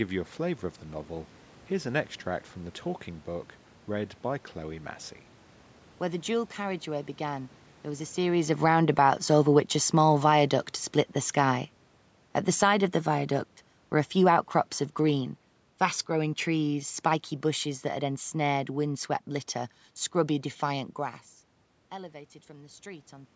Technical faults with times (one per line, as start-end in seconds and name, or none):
8.50-18.95 automatic gain falling
8.87-9.41 automatic gain rising